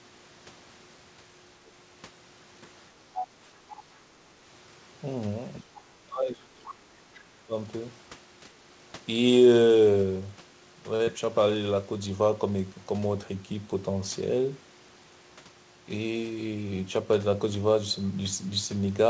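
What we've got here is a speech recording that's come through a call path, and it has a few problems. First up, the other side's voice is leaking through in short bursts: from 3.14 to 3.27 s it sits only about 10 dB under the talker, and from 3.7 to 3.75 s and again from 6.69 to 6.73 s it's fainter, around 20 dB down. Those scraps are most likely loudspeaker echo that the echo canceller didn't fully scrub from the mic. Right around that last scrap there's a bigger problem. From 5.58 to 7.53 s, about two seconds in all, the talker's own speech gets pushed down, dipping as deep as roughly 25 dB. That's the classic signature of speech suppressed in double talk, likely because both ends were talking at once and the canceller couldn't tell its own talker from the echo, so it turned everything down. Later on there's a short stall from a late packet at 10.96 to 11.03 s. The last bit of sound gets held for about 36 ms until the packet shows up, and then it carries on with nothing lost, so you just hear a slightly stretched moment. 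Immediately after, from 11.04 to 11.10 s, comes a short concealed packet loss: about 40 ms never arrived, and the receiver papered over it with roughly 33 ms of extrapolated sound, which comes across as a quick smear before the real audio blends back in. Underneath all of this you can hear the call codec's band limit, with nothing above 8 kHz, which is consistent with G.722 at 64 kbps.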